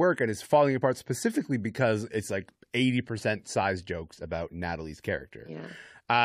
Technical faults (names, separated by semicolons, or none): none